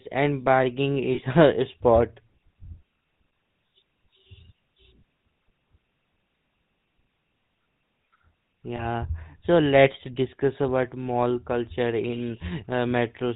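From the start, the speech carries the sound of the GSM full-rate codec. Nothing comes through above 4 kHz. The coder rebuilds the vocal tract from a compact model and excites it with evenly spaced pulses, using only one excitation sample in three. That leaves a buzzy, gravelly roughness on every phrase, and it is plainly audible. The texture fits the 13 kbps full-rate coder.

At 1.14 s, right after "and bargaining", lost GSM frames break the flow until 1.21 s. About 40 ms of signal is missing, which points to two dropped 20 ms frames. The decoder repeats the last good frame's settings. The gap becomes a short, rough, metallic ring instead of silence.

At 8.76 s, just before "so let's discuss about", a second loss lasts to about 8.85 s. It fits a single 20 ms frame. The concealment is the same, with a brief metallic smear.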